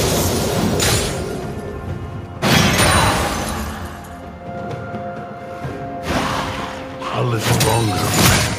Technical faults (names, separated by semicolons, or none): none